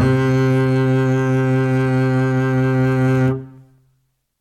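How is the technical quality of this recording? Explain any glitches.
No glitches can be heard anywhere in this music recording.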